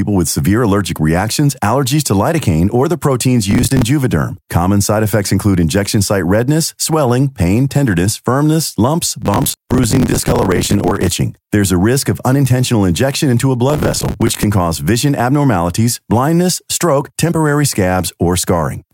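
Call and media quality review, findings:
Processor overload crackle in the speech, three bursts. 3.51–3.82 s after "lidocaine or the proteins". 9.22–11.07 s after "pain tenderness firmness lumps". 13.70–14.44 s between "unintentional injection into a" and "cause vision abnormalities blindness". Gritty tearing from strings of missed buffers, roughly 10 ms each, replayed as stale audio. Likely the audio thread is CPU-starved.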